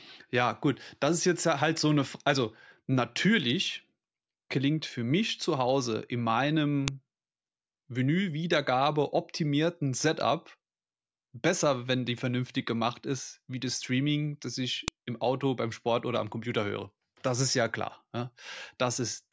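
At 6.88 s and again at 14.88 s, a sharp, loud click cuts through the speech. This is a file header played as audio. The pieces were joined with their headers left in. Those bytes play as samples. The 8-second spacing points to fixed-length chunks.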